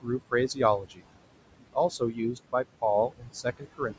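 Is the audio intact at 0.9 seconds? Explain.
No. From 0.79 to 1.05 s the noise suppressor cuts part of the speech. It misjudges the speech as steady background and attenuates those bands by up to about 21 dB, over roughly a fifth of a second in total, so the sound there comes out swallowed and faint.

The same noise suppressor artifacts run through this moment as well. Frame by frame it pulls the noise down by about 21 dB, so the residual background rises and sinks with the speech and can warble or flutter.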